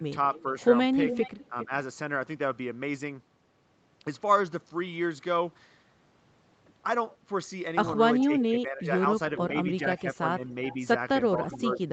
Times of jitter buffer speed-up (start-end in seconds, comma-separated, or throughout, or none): none